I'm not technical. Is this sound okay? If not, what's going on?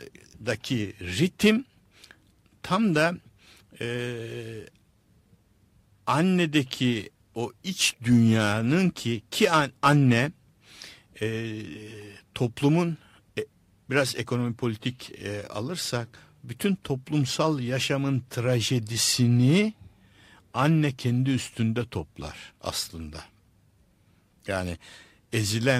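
Yes, this speech recording is okay. Nothing in it has gone wrong, so there's no problem to explain.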